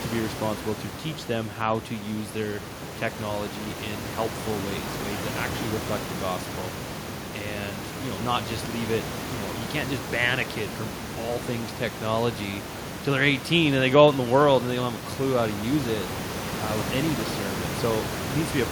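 No technical faults can be heard in the speech, with the background room noise of the recording sitting about 8 dB below the talker.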